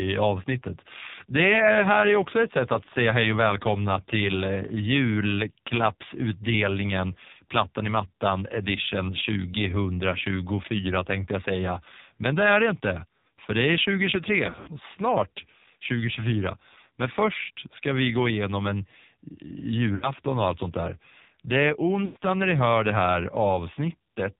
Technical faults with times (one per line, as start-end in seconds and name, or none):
0.00-24.39 AMR narrowband mobile codec
14.46-14.72 lost AMR speech frames
19.96-20.12 lost AMR speech frames
22.06-22.17 lost AMR speech frames